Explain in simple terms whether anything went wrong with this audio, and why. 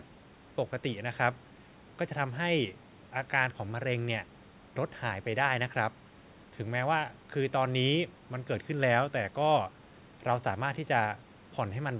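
Nothing went wrong; this is ordinary phone-call audio.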